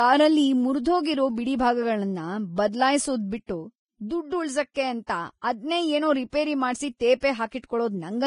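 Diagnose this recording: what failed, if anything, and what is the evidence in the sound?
The codec stage likely ran Vorbis compression at a very low rate, near 26 kbps. The speech is hissy and grainy throughout, with nothing above 10.5 kHz.

Pre-echo also comes from the codec stage. Just after "ಅದ್ನೇ ಏನೋ ರಿಪೇರಿ ಮಾಡ್ಸಿ", from 7.20 to 7.23 s, quantisation noise spreads about 27 ms ahead of an attack, smearing it.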